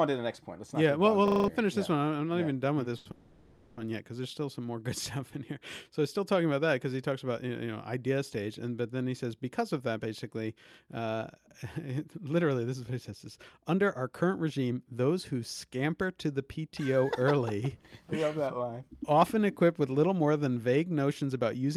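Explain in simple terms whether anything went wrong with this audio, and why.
Several things go wrong in this speech, spread through the clip.

From 1.28 to 1.48 s there's a system hang loop. The computer or its driver froze while the sound hardware kept replaying the same 40 ms chunk, five times in a row. That gives a rapid 25 Hz rattle, which fits a 40 ms ring buffer, and about a fifth of a second of real audio is gone.

Right after "yeah even done with", from 2.97 to 3.06 s, there's a short stall from a late packet. A packet turned up late, so the receiver held the last sound for 80 ms until it arrived and then carried on. Nothing is lost, but that bit sounds stretched.

Straight after that, from 3.11 to 3.78 s, there's a call audio freeze. The sound hangs on and fades into a tail for 660 ms without ever going fully silent, and then picks up with "one yet because there's". Nothing is cut. 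The likely cause is packets held up on the network, leaving the receiver nothing to play.

From 5.18 to 5.85 s there's a jitter buffer slow-down. The receiver was short of audio in reserve, so it repeated tiny slices of sound to buy time, adding 46 ms. The speech plays at 94% speed with the pitch unchanged, so it sounds a little drawn out.

Finally, there are three jitter buffer speed-ups, where the receiver had too much audio queued and trimmed tiny bits to catch up. From 9.80 to 12.12 s the speech runs at 110% speed and loses roughly 0.3 s. From 16.57 to 17.05 s it runs at 110% again. From 21.09 to 21.76 s, just after "little more than vague", it runs at 107%. Each of the last two loses only a sliver. The pitch stays put in all three, but the talking sounds hurried.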